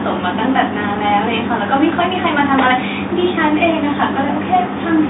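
Nothing stood out on listening to this speech recording, heard through a telephone line that carries nothing above about 3.8 kHz.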